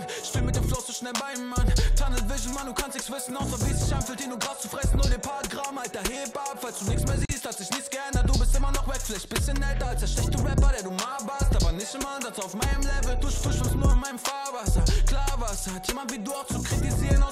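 At 7.25 s the sound drops out for about 40 ms, a gap at a join of encoded pieces. Separately encoded segments were spliced untrimmed, leaving encoder delay and last-frame padding as silence. A waveform shows a flat notch with smeared edges; a spectrogram shows a thin vertical blank band.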